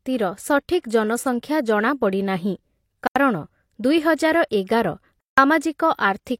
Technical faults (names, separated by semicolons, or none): pre-echo; block of digital silence